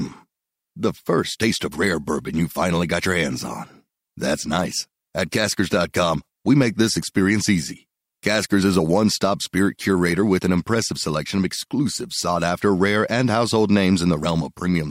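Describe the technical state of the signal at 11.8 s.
At 11.8 s the signal is intact, with no audible fault at that point in the speech.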